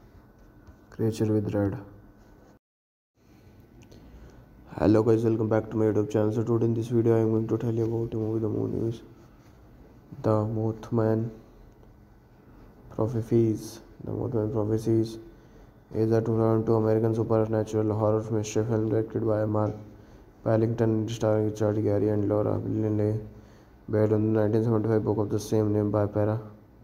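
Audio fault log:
Nothing stood out on a careful listen to this recording.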